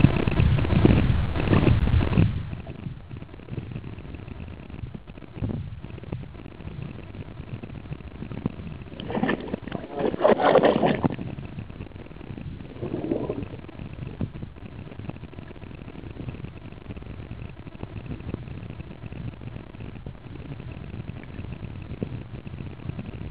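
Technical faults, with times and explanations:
No technical faults are heard.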